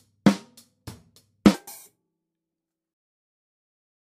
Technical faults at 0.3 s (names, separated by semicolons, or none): none